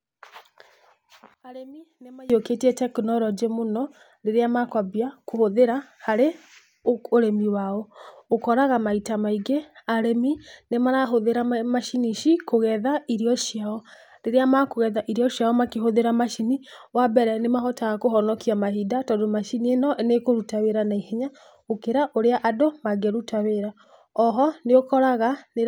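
One channel inverted, 1.34 to 2.30 s: the speech collapses by about 24 dB to a faint residue before "tekinorojĩ mũno rĩrĩa makwambia", likely from reversed polarity cancelling the shared centre in mono.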